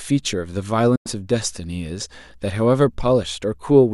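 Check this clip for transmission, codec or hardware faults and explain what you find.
One fault stands out: a digital broadcast dropout from 0.95 to 1.07 s. The receiver stopped getting valid frames and muted, so the speech fades out within about 8 ms and roughly 96 ms is lost, which fits about four dropped frames. The waveform shows a flat gap and the spectrogram a clean blank column.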